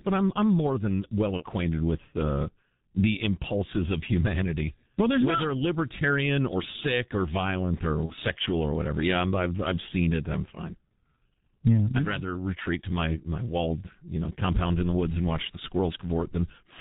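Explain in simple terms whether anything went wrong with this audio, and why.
The whole clip went through the G.723.1 codec, an old internet-phone format. It throws away everything above 4 kHz and tracks the voice slowly. So the speech sounds muffled and hoarse throughout. Consonants come out blurred.

There is also VoIP packet loss concealed by the speech codec, twice. About 30 ms of data went missing each time. The decoder guessed by stretching the last bit of voice. That makes a short, fading smear, either buzzy or noisy. It happens from 1.37 to 1.44 s, after "I'm more than well" and before "with uh the impulses". It happens again from 8.06 to 8.14 s, after "or sick or violent" and before "sexual or whatever".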